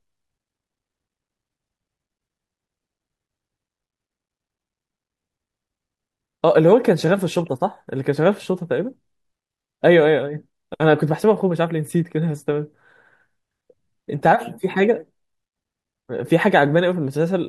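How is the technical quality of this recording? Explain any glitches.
No glitches or faults heard.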